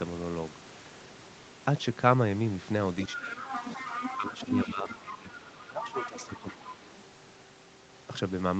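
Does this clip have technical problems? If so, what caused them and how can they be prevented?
Yes. A second voice, the other side's voice leaking through, can be heard from 3.03 to 4.73 s at about 5 dB below the talker. It returns from 4.91 to 6.65 s at about 10 dB below. This is likely residual echo. The far end played on a loudspeaker, the microphone picked it up, and the echo canceller left part of it in. To prevent it, use a headset or give the canceller better acoustic isolation and tuning.

The talker's own speech is suppressed in double talk while that second voice is present. It dips by roughly 10 dB for about 0.3 s at 3.13–3.44 s and again at 4.17–4.49 s. A longer, deeper drop of roughly 15 dB runs from 4.65 to 6.79 s. The likely cause is the echo suppressor mistaking both voices for echo and attenuating everything. A canceller with proper double-talk detection would keep the near voice at full level.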